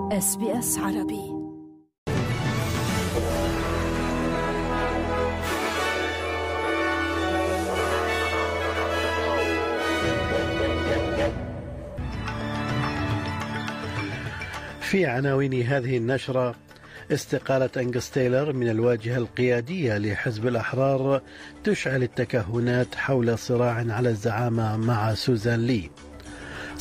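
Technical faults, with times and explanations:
Throughout, sample clock jitter: the converter's timing wanders by around a microsecond, so each sample is captured a little early or late at random. Because the error is the waveform's slope multiplied by that timing slip, steep, bright, loud passages pick up the most distortion, and quiet stretches stay clean. The result is a fine hiss and grainy roughness riding on the sound, roughly 40 dB below it, swelling and fading with the level and high-frequency content.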